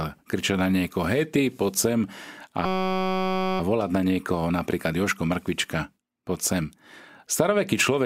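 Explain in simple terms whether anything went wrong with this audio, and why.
Something did go wrong: from 2.66 to 3.60 s the speech turns into a steady buzz. This is a system hang loop: the computer briefly froze while the sound hardware replayed one tiny 5.33 ms slice, probably a 256-sample buffer, 176 times at 188 Hz. Unlike a dropout, there's no silence, just one repeated sliver.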